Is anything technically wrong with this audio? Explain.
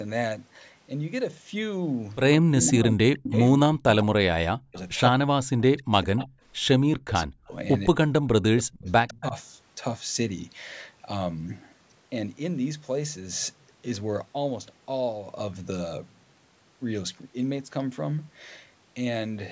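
Yes. Speech suppressed in double talk occurs at 2.64–4.14, 4.51–4.77, 5.12–6.37, 6.79–7.53 and 7.89–9.35 s. The voice dips sharply, by up to roughly 40 dB, and breaks up in pieces. This is likely an echo canceller that, with both sides talking, could not separate this talker from loudspeaker echo and attenuated everything.

Echo leak appears at 3.17–3.36, 6.19–6.27 and 8.88–9.21 s as a faint copy of the voice trailing it by 157 ms, about 15 to 30 dB below the speech. The likely cause is a loudspeaker on one side whose echo canceller let part of the microphone pickup through and sent it back.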